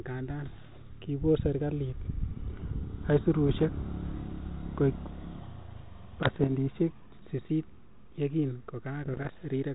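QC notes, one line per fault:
0.42–0.91 s, 3.48–3.65 s, 6.21–6.51 s and 9.04–9.32 s: bit errors on an ADPCM link. Four patches of pops and gritty bursts with quick level jumps, each pointing to something like half a percent of bits flipped, a bit heavier in the last one. A flipped bit knocks the decoder's step size and predictor off track, so each hit keeps ringing for a few milliseconds before it settles back into the 4 kHz-limited 32 kbit/s G.726 sound.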